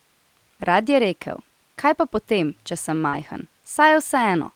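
From 0.75 to 0.93 s the speech turns rougher and noisier for about 100 ms, with no gap. This is a lost packet rebuilt from error correction. Five separate packets never arrived, but each following packet carried a low-bitrate spare copy. The decoder played those coarser copies instead, so the stretch stays continuous but loses detail.

At 3.09 to 3.15 s a brief smear interrupts the speech. This is short concealed packet loss. About 40 ms of audio failed to reach the decoder in time. The receiver covered roughly 35 ms of that by extending the preceding sound, following its pitch where voiced or using shaped noise where not, then blended back into the real signal.

From 3.13 to 3.31 s, overlapping the end of that smear, the same rough, noisy texture returns for about 100 ms. This is another lost packet rebuilt from error correction, again played from the low-bitrate copies carried in later packets.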